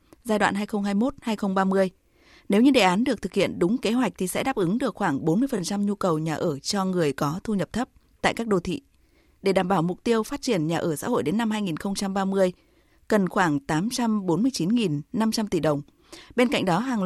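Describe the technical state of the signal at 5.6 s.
Repeated frames occur from 5.57 to 5.59 s, just after "đáp ứng được khoảng". A 21.3 ms stretch of the speech is played a second time, which points to a single compressed frame being written or sent twice, so the decoder reproduces the same slice back to back. The result is a brief stutter, and the audio runs 21.3 ms longer than it should.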